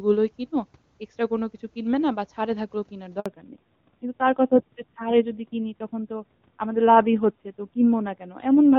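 At 3.20 s the speech cuts out for about 60 ms, ending at 3.26 s. This is a handover gap: the call was moved between networks and no speech frames arrived during the switch. The sound decays within a few tens of milliseconds into silence, and whatever was spoken in that interval is lost rather than delayed. The dropout is short but abrupt, heard as a clipped hole in the speech.

From 3.26 s to the end of the clip, a fallback to narrowband follows the handover. Before the gap, the speech has the open, airy top end of the AMR wideband (HD Voice) codec, with little audible coding damage at a rate that fits roughly 23.85 kbit/s. After the switch, the call is carried by AMR narrowband at a low rate consistent with about 7.4 kbit/s. Nothing above 4 kHz remains, so sibilants and breath lose their crispness, and the voice turns duller, boxier and rougher.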